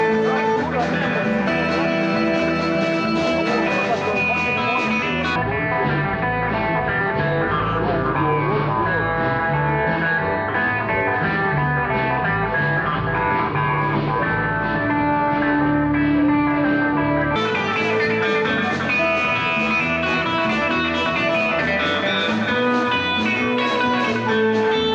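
From 5.36 s to 17.36 s the sound drops about 7 semitones and slows to two-thirds speed, everything dragging low and heavy. This is a wrong sample rate: samples played back unconverted at a slower rate, which fits 48 kHz material run at 32 kHz.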